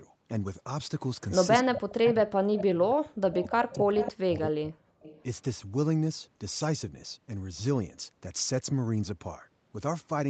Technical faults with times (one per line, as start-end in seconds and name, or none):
1.31-2.10 echo leak
1.64-4.94 speech suppressed in double talk
2.54-2.62 echo leak
3.33-4.12 echo leak
5.01-5.23 echo leak